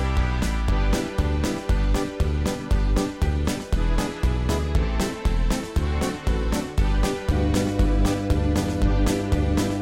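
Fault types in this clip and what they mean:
Mains hum: Power-line energy has leaked into the signal, probably through a ground loop or a nearby transformer. It shows as a steady low tone at 50 Hz. The tone appears at 7.32 s and runs to the end of the clip at 9.82 s. It is loud, sitting only a little below the wanted sound. So the drone is clearly audible underneath everything in those last seconds.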